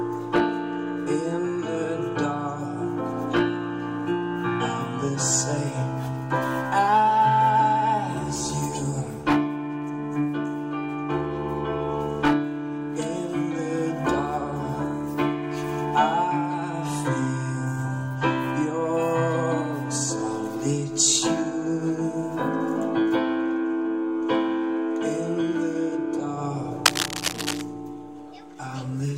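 From 26.86 to 27.62 s, cable scratch noise appears. Dense, uneven scratching sits over the sound at about its own level. A worn cable or connector being moved is the likely cause.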